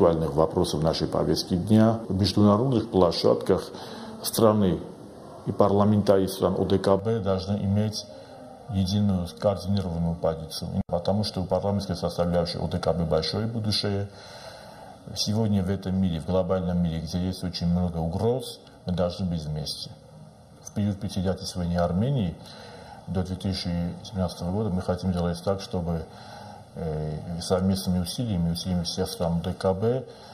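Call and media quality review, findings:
Channel delay (comb filtering), 6.99 s to end. Hollow, phasey sound. One channel about 1.5 ms late before mono sum. Evenly spaced notches from around 300 Hz.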